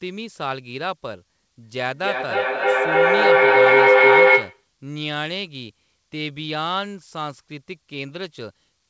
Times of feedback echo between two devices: 1.63-4.68

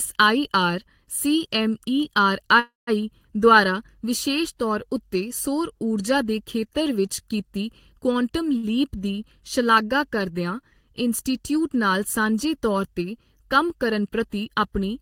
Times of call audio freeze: 2.59-2.90

